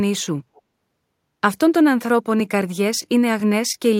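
A click first sounds at about 0.41 s. It returns once a second until about 3.4 s, roughly four times in all. These are clock drift buffer slips. Two devices likely run on clocks that disagree by about a tenth of a percent. The buffer between them slowly fills or drains. Then a small block of a few dozen samples is dropped or repeated. Each jump breaks the waveform and makes a short tick over the speech.

From 0.55 s to 0.61 s there is a faint echo leak. A copy of the speech returns about 213 ms late. It sits about 35 dB below the direct sound and lasts only 60 ms. A loudspeaker on the far end likely fed its microphone, and the echo canceller missed this scrap. The leaked fragment sounds like a brief ghost of the talker.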